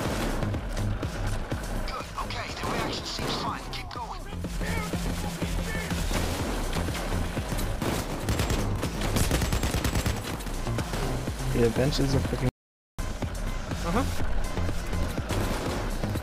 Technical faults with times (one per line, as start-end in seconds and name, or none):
12.49-12.99 audio dropout to silence